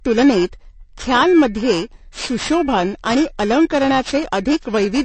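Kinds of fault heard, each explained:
Periodic clock jitter: interference wobbling the converter clock at around 2 kHz puts sidebands at that spacing around every component, giving the speech a rough, metallic edge that disappears in pauses.
MP3 compression: the sound is plainly watery and swirly, with nothing above 8.3 kHz, likely from MP3 encoding at a low bitrate, which fits about 36 kbps, dropping weak frequency lines.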